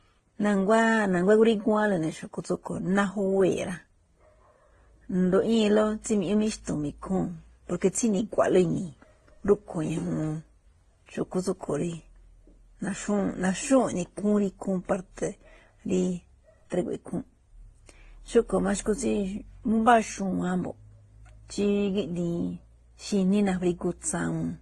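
It's a speech clip that's been through a few lossy codecs in a row. The top end stops dead at 12 kHz for the whole length, with artefacts of different kinds stacked up. That's most likely transcoding between lossy codecs, ending in something like low-bitrate Opus.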